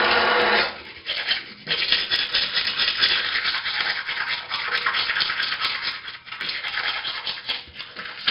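A recording of everyday sounds carrying two faults. Throughout, it shows heavy 4-bit ADPCM compression: each sample is coded as a coarse step from a predicted value, so a gritty hiss rides on every loud event and sharp onsets smear where the step size cannot keep up. Nothing is present above 5.3 kHz, which points to a low sample rate near 11 kHz and a stream of roughly 44 kbps, and that ceiling leaves the sound noticeably dull. From 0.15 s to 8.26 s there are also clock slip clicks, a dense train of faint ticks about every 0.05 s, roughly twenty a second, that merges into a soft rattle, clearest on louder passages, and disappears when the sound drops away. Each tick is a single sample dropped or repeated, most likely because two devices in the chain run on unsynchronised clocks that differ by around 400 ppm, so a whole sample of drift builds up at that steady interval across the length of the clip.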